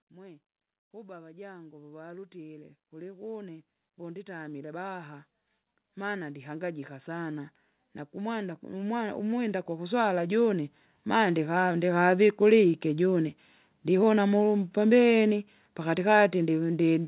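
Automatic gain rising at 0.12–5.25 s, 5.81–7.57 s and 8.11–12.17 s in this speech clip: the gain control judged the input too quiet and raised its gain step by step, so voice and background swell together, by about 11 dB, 4 dB and 10 dB. The last rise levels off just before "vikulike ijune". All of it sits within the call path's band, which stops at 4 kHz, consistent with a 64 kbps G.711 mu-law codec.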